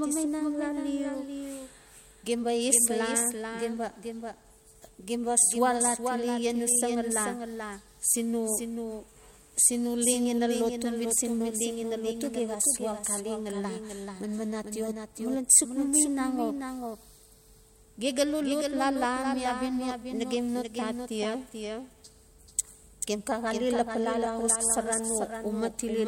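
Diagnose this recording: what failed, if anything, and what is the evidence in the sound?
A doubled audio track runs through the whole speech recording. A second, full-band copy of the speech trails the original by roughly 0.4 s at a level around 5 dB lower. It has no decay or room colouring, so it sounds like a flat slapback rather than reverberation. The fault sits at the capture or buffering stage: the likely cause is the same signal being recorded twice, once through a slower path, and summed into one track.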